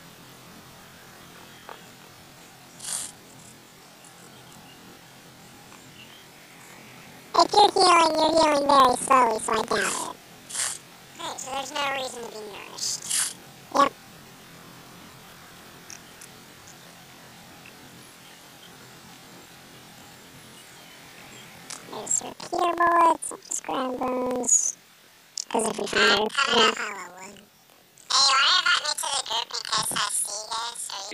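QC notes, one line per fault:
Throughout: planar audio read as interleaved. Each 46 ms block, which fits a 2048-sample layout, is split into its two channels and played back to back at double speed, so the audio sits an octave high with a flutter at 21.5 Hz.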